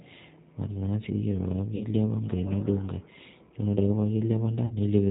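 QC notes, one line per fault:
throughout: G.729 codec. The speech sounds rough, slightly synthetic and dull, with nothing above 4 kHz and plainly audible coding damage. This fits 8 kbit/s G.729A, which rebuilds each 10 ms frame from a vocal tract filter, a pitch predictor and a few pulses.
1.76–1.87 s and 4.66–4.73 s: VoIP packet loss concealed by the speech codec. Each time the voice smears into a buzzy tone or coloured noise that fades, and stays weak briefly afterwards. About 40 ms went missing each time, which fits two lost 20 ms packets. The decoder stretched its last pitch and filter at falling gain, and because each frame builds on the previous one, recovery lagged.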